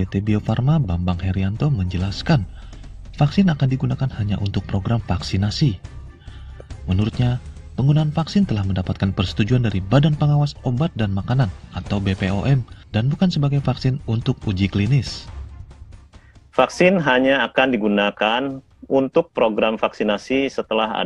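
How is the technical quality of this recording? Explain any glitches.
Nothing in the signal points to a technical problem.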